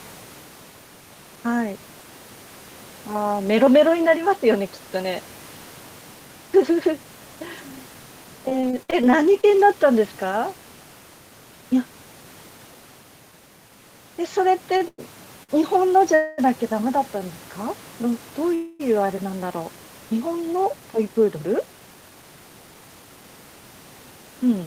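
From 8.49 to 9.45 s the speech turns choppy and robotic. This is repeated packet loss. Ten small holes open in under a second, the longest 52 ms. Each hole is patched by stretching the last sound forward. About 196 ms is filled that way, roughly a fifth of the span. Some 140 ms of real speech never arrives, so pieces are missing.

At 14.77 to 15.51 s the voice drags and stutters. These are repeated stalls. Packets came in late three times, and the jitter buffer ran dry each time. The receiver held the last sound until audio resumed, 182 ms in all, the longest wait 103 ms. Nothing is lost. The speech simply hiccups and then carries on.

Two call audio freezes follow, at 16.15 to 16.40 s and 18.54 to 18.81 s. Each is a brief held buzz, 231 ms and then 253 ms long, that never quite drops to silence. The likely cause is packets held up in transit, emptying the buffer. When they arrive, speech picks up where it stopped. 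No content is missing, but each pause adds a quarter second of delay.

From 21.47 to 23.24 s the talker sounds hurried. This is a jitter buffer speed-up. Audio had piled up in the jitter buffer. To shrink the backlog, the receiver trimmed tiny pitch-period slices again and again. About a fifth of a second is removed. Speech runs at around 113 percent speed with its pitch unchanged. The rushed rhythm is audible, with faint room noise about 28 dB below the voice.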